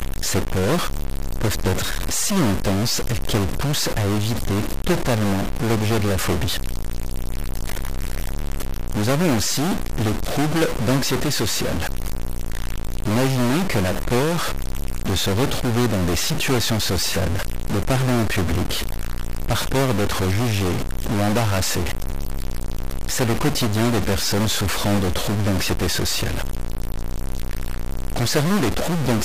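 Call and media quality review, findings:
Harsh, buzzy distortion throughout the speech clip. Pauses filled with noise at about -20 dBFS. Likely stuck bit, converter or data line. One bit fixed; about half the samples off by its weight. Pause noise follows small-signal sign.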